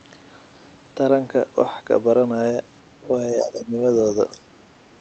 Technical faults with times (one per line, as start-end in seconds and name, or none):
3.35-3.75 speech suppressed in double talk
3.54-3.62 other side's voice leaking through
4.32-4.46 speech suppressed in double talk